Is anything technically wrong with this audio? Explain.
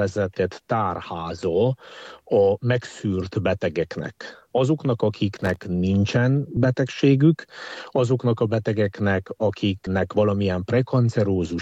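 Yes. Processor overload crackle runs from 5.35 to 5.65 s. The processor falls behind and misses a string of very short buffer deadlines, around fifteen of them, replaying stale audio each time. The hard-edged repeats merge into a gritty burst of crackle over the sound.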